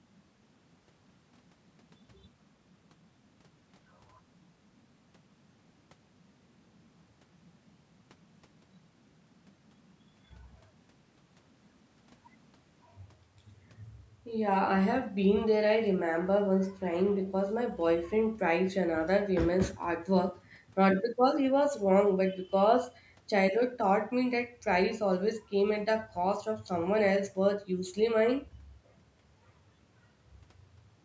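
No technical faults can be heard in this speech; the only processing present is the normal microphone processing of a call.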